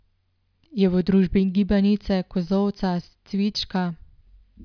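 No technical faults are audible.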